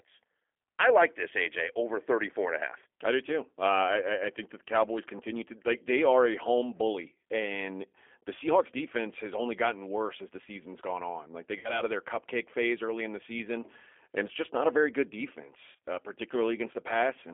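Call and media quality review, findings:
G.729 codec, whole clip: speech band-limited to roughly 300 Hz–3.4 kHz, nothing up top, and a clearly rough, slightly synthetic grain on the speech. Sounds like G.729A, which fits an 8 kbit/s link. Pulse-based excitation rebuilding the voice is what you're hearing.

VoIP packet loss concealed by the speech codec, 11.59–11.83 s: speech is stretched out and fades. About 50 ms missing, which fits five 10 ms frames. The decoder stretches its last pitch and filter and ramps the gain down, so it stays a bit off after packets resume.

Same again, 15.72–15.83 s: About 80 ms lost, scattered across 100 ms, longest gap about 30 ms. Short concealment bursts with weak recovery between them, because each frame leans on the last bad one.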